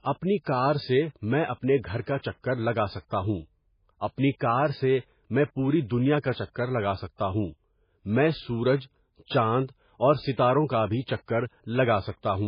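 Speech runs throughout with nothing above 5 kHz and a watery, swirling texture, as quiet detail flickers in and out from moment to moment. That combination of a hard treble ceiling and unstable, burbling residue points to heavy MP3 compression, likely at a very low bitrate around 16 kbps. A plain low-pass filter would dull the sound cleanly without the shimmer, and added noise would sit steadily rather than pulsing with the frames. Pre-echo appears twice: a hiss smears forward from 2.01 to 2.07 s (57 ms) and again from 2.20 to 2.23 s (33 ms), each ahead of a sharp onset that sounds soft as a result. The codec spread its quantisation noise across the block containing the attack, so the quiet moment before it is filled. Unlike a reverb tail or an echo, this smear comes before the sound rather than after it.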